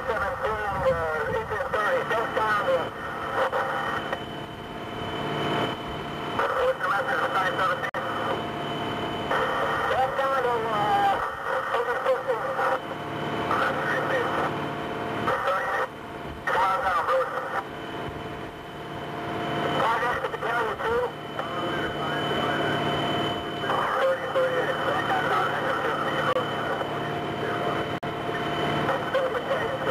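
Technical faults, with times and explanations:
7.89–7.94 s and 27.98–28.03 s, gap at a join of encoded pieces: separately encoded sections were joined without trimming the encoder start delay and end-frame padding, so a hole of about 50 ms and 47 ms opens in continuous sound, its edges softened by the codec, before the sound resumes where it stopped.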